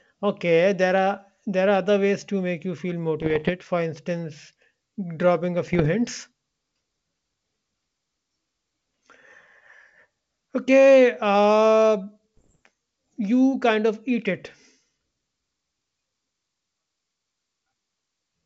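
Bits flipped on the ADPCM link carrying this wideband G.722 speech, in three spells: 3.22 to 3.51 s, 5.67 to 5.89 s and 12.37 to 12.59 s. The error rate is well under one percent. Each corrupted code throws the decoder's step size and predictor off, so the damage rings on briefly. Each spell sounds like a cluster of pops and rough, gritty bursts with short jumps in level.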